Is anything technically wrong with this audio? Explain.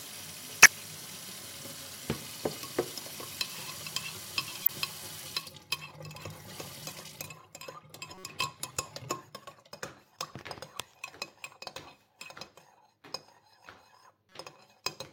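Yes. There is a corrupt frame decoded fault, occurring four times: 0.62 to 0.72 s, 4.62 to 4.70 s, 8.14 to 8.24 s, and 14.29 to 14.36 s. Damaged bits in a few compressed frames were decoded anyway, spraying energy into wrong frequencies. Each gives a brief chirp or noise burst, loud early on, faint near 8.1 s.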